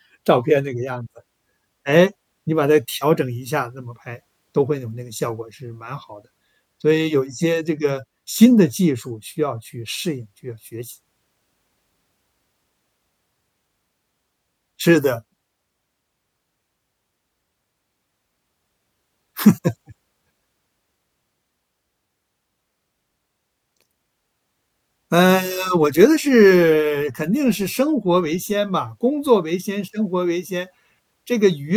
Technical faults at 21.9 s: none

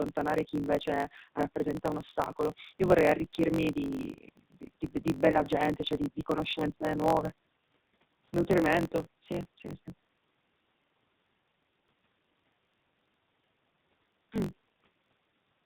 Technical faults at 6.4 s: AMR narrowband mobile codec; block size mismatch (truncated)

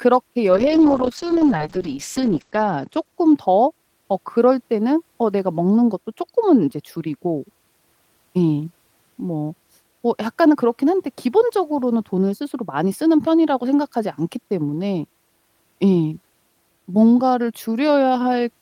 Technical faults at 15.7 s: none

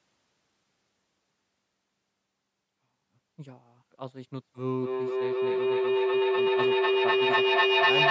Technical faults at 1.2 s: none

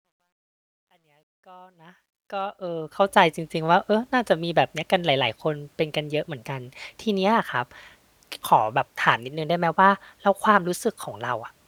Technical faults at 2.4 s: truncation distortion on a fade

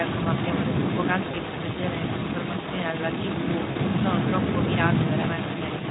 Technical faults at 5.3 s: echo leak; VoIP packet loss concealed by the speech codec

